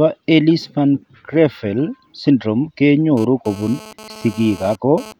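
From 3.17 s to 5.13 s, a hard, raspy buzz at 217 Hz, rich in harmonics and about 20 dB below the speech, comes and goes. This is GSM phone buzz: a nearby 2G phone's data bursts, rectified by the audio circuitry.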